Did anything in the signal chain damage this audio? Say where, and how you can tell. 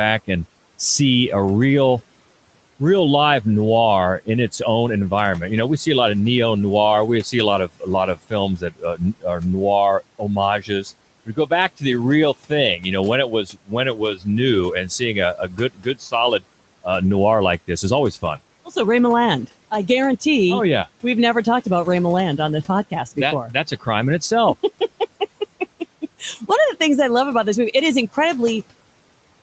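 Yes. The noise suppressor in the call processing cut speech six times: 7.32–9.45 s, 10.19–14.28 s, 14.82–16.86 s, 17.68–18.76 s, 22.68–24.31 s and 25.20–26.49 s. Each time, brief stretches of speech, up to about a second in total, dropped by as much as about 19 dB. The suppressor treated soft consonants and word tails as noise and gated them down with the room noise. On a waveform, the syllable tails collapse abruptly. On a spectrogram, the energy thins or vanishes in short patches below the 8 kHz ceiling.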